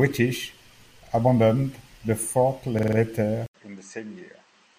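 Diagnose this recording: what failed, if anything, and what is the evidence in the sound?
The capture driver or buffer stage failed twice: fresh audio was late, so the device replayed its last block instead, a repeated buffer. At 1.07 to 1.12 s one piece of sound plays twice, and at 2.79 to 2.97 s a piece plays five times in a row, heard as a short mechanical stutter with a hard join at each repeat. Each repeated piece lasts about 46 ms, which fits a 2048-sample buffer. No audio is skipped; the repeats are inserted.

From 3.46 s to the end, the sound changes abruptly: after an 80 ms silence it returns about 10 dB quieter, dull and band-limited with nothing above 8.4 kHz, and carrying a new noise floor roughly 45 dB below the signal. This points to the input stage at the device level, most likely the input switched to a poorer device, such as another microphone or a headset call profile, with its own narrower band, level and background noise.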